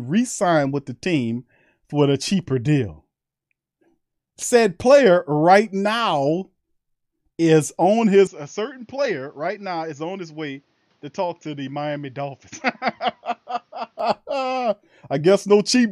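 At 8.27 s, right after "is on", the speech turns dull and drops about 10 dB with nothing above 6.8 kHz until 14.00 s. This is likely an input switched to a poorer device.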